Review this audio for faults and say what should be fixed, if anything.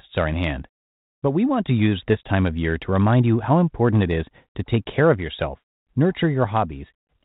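No faults turned up in this audio, so nothing needs to be fixed.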